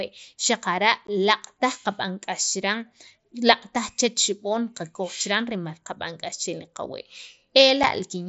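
At 1.07 s and again at 7.83 s, unconcealed Bluetooth headset packet loss blanks the speech for about 15 ms and 7.5 ms, fitting two lost frames and then one, on the mSBC link. Each drop has abrupt edges, seen as a flat waveform gap and a thin vertical spectrogram stripe.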